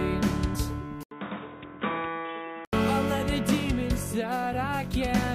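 At 0.54 s the decoder skips compressed frames: a short run of the encoded stream is missing or rejected, so playback jumps ahead by roughly two frames of about 24 ms each, losing around 50 ms of audio. From 1.03 s to 2.73 s the input was likely switched to a poorer device. The recording cuts out for about 80 ms at the switch, then returns band-limited with nothing above 3.8 kHz, so the sound turns dull and boxy. It is also roughly 5 dB quieter and carries a new noise floor sitting around 30 dB below the signal, until the original, brighter input comes back at 2.73 s.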